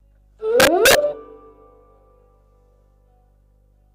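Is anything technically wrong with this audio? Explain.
Yes. Integer overflow runs from 0.60 to 0.95 s. During that stretch the signal was pushed about 3 dB past the largest value the integer format can hold. Instead of being held at the ceiling, every sample over the limit wrapped around to the opposite extreme of the range. Each loud peak therefore jumps from full positive to full negative in a single step, so the sound is broken by violent, sharp cracks that are far harsher than ordinary clipping.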